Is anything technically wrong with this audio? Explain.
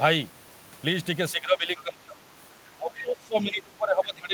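Yes. The speech has two related faults from echo cancellation.

Speech suppressed in double talk, from 1.32 to 2.17 s and from 2.75 s to the end. The speech dips by up to about 20 dB. The canceller likely mistook overlapping talk for echo.

The other side's voice leaking through, at 1.77 to 1.82 s and 2.95 to 2.99 s. Brief faint scraps of a second voice appear, about 20 to 25 dB below the speech. These are likely echo residue the canceller missed.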